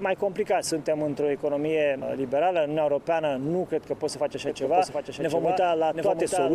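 At 4.48 s a doubled audio track starts abruptly and runs to the end: a second, undecayed full-band copy trails the original by roughly 0.7 s, about 5 dB quieter. It likely comes from a slower capture path re-recording the same signal.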